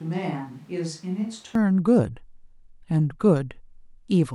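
From the very start up to 1.55 s the speech sounds roomy and hollow, thin in the bass and roughly 10 dB quieter, with room noise sitting about 30 dB beneath it. That's likely a switch to a distant microphone, and it snaps back to close sound at 1.55 s.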